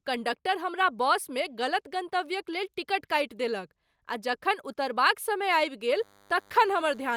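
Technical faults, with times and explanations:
5.92–7.17 s: DECT cordless phone buzz. A thin, steady buzz at 100 Hz with a dense stack of harmonics enters and runs to the end, about 30 dB below the speech. A nearby DECT handset or base emits a radio burst every 10 ms, which the audio circuitry rectifies into this tone.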